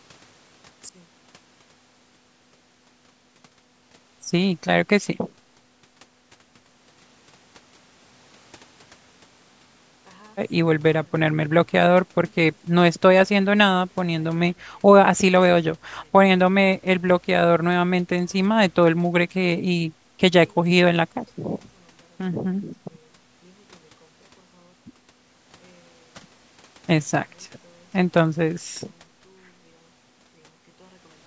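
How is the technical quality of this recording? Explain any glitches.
From 0.89 s to the end, the speech collapses to a faint residue, roughly 36 dB quieter than the opening moment. The likely cause is one channel inverted: with one stereo side's polarity reversed, everything the two channels share cancels when summed to mono, leaving only their small differences. Above this, the band stops at 8 kHz, consistent with call microphone processing.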